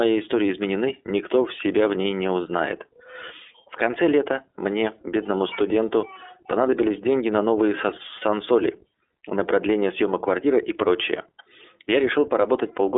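Throughout the speech, the gain swings by roughly 5 dB, so soft and loud passages sit closer together and the delivery sounds flattened and squeezed. This is gain pumping. The likely cause is input gain set far too high, with a fast limiter or compressor clamping down on each loud syllable and releasing in the gaps.

The whole clip also sounds thin and telephone-like. Nothing comes through below about 300 Hz or above 3.6 kHz, and the voice has a plainly audible rough, slightly synthetic grain. That is the iLBC codec, a narrowband VoIP coder that rebuilds each 30 ms frame's excitation on its own, without reference to the frame before. The level of damage fits its 13.33 kbps mode.

From 8.18 to 8.22 s, just after "понадобились деньги на новые", the speech briefly freezes into a short held, buzzy vowel-like sound before snapping straight back to normal. These are lost iLBC frames. A packet went missing, and the decoder filled the hole by repeating the last pitch cycle blended with noise. 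The gap fits a single 30 ms frame, and because each iLBC frame decodes independently, the voice recovers at once.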